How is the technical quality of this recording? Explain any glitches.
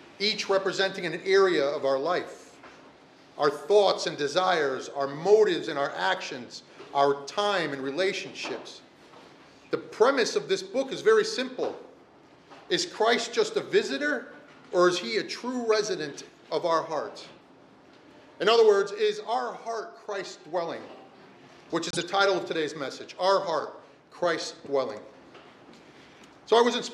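Two brief glitches stand out, both a corrupt frame decoded: a short one at 15.73 s, and a longer one from 21.91 to 22.03 s, seemingly spanning about three frames. Damaged compressed data was played anyway, so energy lands at wrong frequencies. This gives a chirp, squeak, blip or burst of noise rather than a click's broadband tick.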